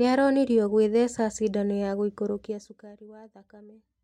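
A gain change applied in unsmoothed steps, roughly a hundred increments a second, rather than as a continuous ramp, causes zipper noise in this speech clip from 2.29 to 2.95 s, just after "aronirio kwitheca cindano ya". Each jump in level puts a tiny discontinuity into the waveform. Together they make a fine ticking, zipping texture riding on the speech while the level falls by about 20 dB.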